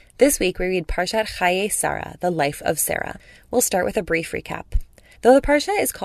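No technical faults can be heard anywhere in the speech recording.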